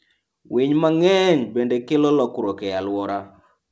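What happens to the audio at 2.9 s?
At 2.9 s the speech passes through intact, with no dropout, glitch or distortion, only the band limit of the call path, which carries nothing above 8 kHz, consistent with a wideband codec such as G.722.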